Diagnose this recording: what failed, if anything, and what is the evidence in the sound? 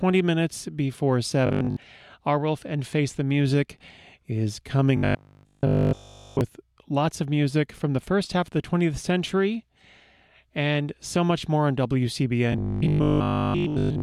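Robotic sound from repeated short buffers appears at 1.47 to 1.77 s, 4.97 to 6.41 s and 12.52 s to the end. The speech becomes a rigid metallic buzz fixed at 50 Hz. That points to a 20 ms chunk being replayed, most of the time in the first burst and almost continuously in the later two. The likely cause is buffer underrun at the driver or buffer stage. Unlike mains hum, the buzz comes only in bursts and still loosely tracks the speech.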